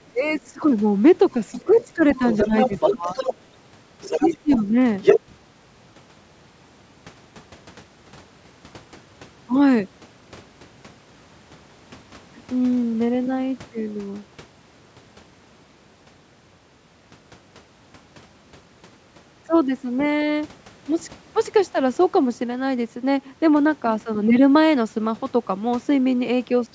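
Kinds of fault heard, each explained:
speech suppressed in double talk: While the far side talks over the talker, the echo canceller likely fails to separate the two and turns everything down. The talker's speech dips in short bursts, by up to about 20 dB, around 0.13–0.62 s, 1.33–3.17 s, 4.2–4.64 s and 5.3 s.
other side's voice leaking through: A second voice sits under the talker, likely loudspeaker echo the canceller did not fully remove. It is a faint scrap near 0.3 s, about 30 dB down, then longer stretches at 1.71–3.34 s and 4.01–5.2 s, close to the talker's own level.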